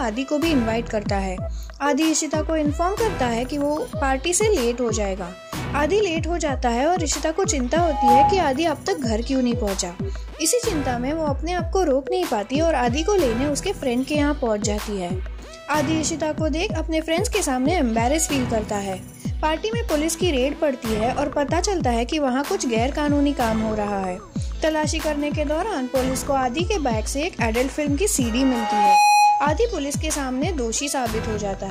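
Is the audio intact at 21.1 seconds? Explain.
Yes, at 21.1 seconds the audio plays through intact, with no dropout, click, distortion or other fault at that moment.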